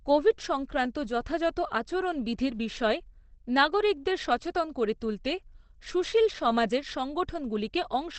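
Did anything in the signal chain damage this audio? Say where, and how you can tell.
Yes, at the codec stage: throughout, the speech is muffled and hoarse with nothing above 8.6 kHz, likely Opus compression in its low-bitrate speech mode, with less swirling than MP3 would give.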